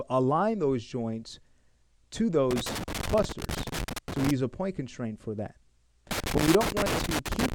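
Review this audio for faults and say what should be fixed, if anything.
Loose connector crackle appears twice, from 2.51 to 4.31 s and again from 6.11 to 7.54 s, running almost to the end of the clip. Each episode is an irregular burst of crackle and scratching laid over the audio. A worn or dirty contact in the signal path is making and breaking rapidly as the cable or plug shifts, chopping the signal on and off. Any DC present on the line turns those interruptions into pops. Re-record the affected passages once the faulty connection is found. To prevent it, clean or replace the suspect connectors and cables, secure them so they cannot move during recording, and wiggle-test each joint before a session.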